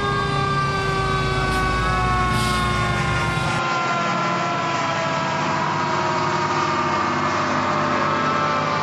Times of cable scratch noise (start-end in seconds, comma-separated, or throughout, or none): none